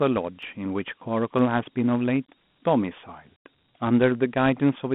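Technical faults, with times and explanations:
Throughout, Dialogic VOX ADPCM: the speech has the gritty hiss of 4-bit Dialogic (OKI) ADPCM at around 32 kbps, squeezed into a phone line band of 150 Hz to 3.4 kHz. The coarse steps make the codec damage plainly audible, which fits an 8 kHz telephony recording.
0.43 s and 1.39 s, dropped samples: each is a single sharp click, a thin vertical line across the spectrum. A fraction of a millisecond is likely missing from the stream, so the waveform jumps straight to a later value. The gap is far too short to remove any audible sound.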